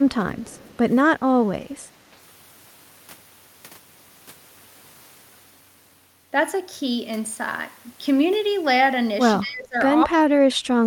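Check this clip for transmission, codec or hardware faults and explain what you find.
Two faults are audible: brief losses of the speech during overlapping talk, and a faint delayed echo near the start.

Speech suppressed in double talk: the speech dips at 0.06 to 0.1 s by a few decibels, then drops harder from 9.41 to 9.76 s, by about 20 dB, and from 10.05 s to the end, by about 35 dB, almost vanishing. The likely cause is an echo canceller that, with both sides talking at once, could not tell this talker from loudspeaker echo and attenuated everything.

Echo leak: from 0.41 to 0.77 s a faint, delayed copy of the speech trails it by 219 ms, sitting about 30 dB below the direct sound. This is likely residual echo from a far end on loudspeaker, where the echo canceller failed to remove all of what its microphone picked up and sent that remainder back down the line.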